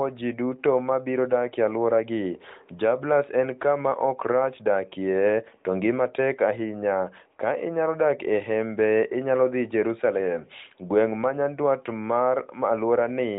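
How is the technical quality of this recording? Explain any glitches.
No glitches or faults found.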